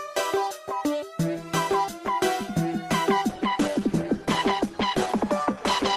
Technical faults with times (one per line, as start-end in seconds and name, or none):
3.29-5.96 adaptive stream at a lower bitrate